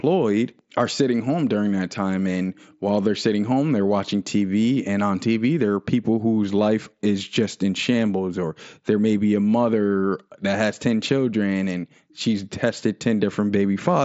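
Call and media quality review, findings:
No faults found; speech carried over the Bluetooth mSBC headset path with its expected band limit near 7.7 kHz.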